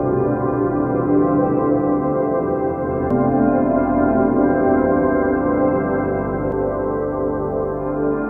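CD skips at 3.10 s and 6.52 s: the laser jumps tracks, leaving a tick, a mute of a few milliseconds, and the music resuming elsewhere.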